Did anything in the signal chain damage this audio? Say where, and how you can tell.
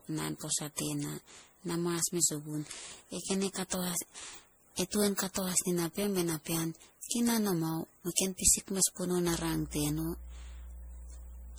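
Yes. At the codec stage, the whole clip sounds swirly, hollow and smeared, with blurred attacks and patchy spectrogram holes: likely generation loss from around ten 64 kbit/s MP3 passes.

In the analogue wiring, mains hum from 9.27 s to the end adds a steady 60 Hz line with low harmonics at about −15 dB relative to the signal, from ground-loop or nearby transformer coupling.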